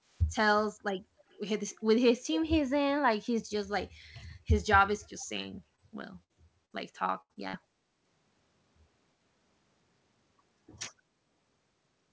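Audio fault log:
0.11–0.22 s, 1.29–1.37 s and 5.19–5.25 s, echo leak: faint scraps of the sound return 291 ms late, very quiet at first and rising to roughly 30 dB below the main signal by the third. This is likely the far end's loudspeaker audio reaching its microphone and slipping past its echo canceller.
5.76–5.80 s, 6.72–6.75 s and 7.33–7.38 s, short concealed packet loss: each is a brief smear or wobble where a consonant can blur away. About 20 ms of audio never arrived, so the decoder extended the preceding sound to fill the gap and then blended back into the real signal.
6.24–6.31 s, 6.65–6.72 s, 7.21–7.31 s and 7.48–7.55 s, burst of packet loss: a held buzz or fading hiss replaces the sound, and the sound then resumes further on with a piece missing. Runs of 40 to 80 ms were lost, and the receiver stretched the last sound while turning it down. In the 6.6–7.6 s stretch these combine with the short losses to make that passage choppy.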